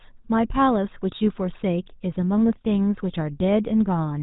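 From start to finish the speech carries GSM full-rate codec damage, plainly audible as a buzzy, gravelly roughness. A coarse regular-pulse excitation drives a vocal-tract filter, fitting roughly 13 kbps. A spectrogram shows nothing above 3.9 kHz and smeared, grainy harmonics.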